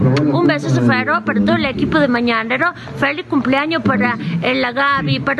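Gain pumping runs throughout. The gain swings around 10 dB as loud sounds pull it down, leaving loud and soft parts closer in level and the sound squashed, likely from excessive input gain and a fast limiter.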